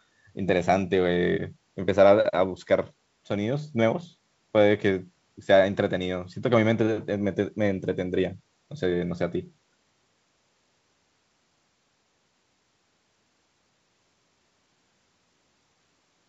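The clip is speech, and nothing is technically wrong with it.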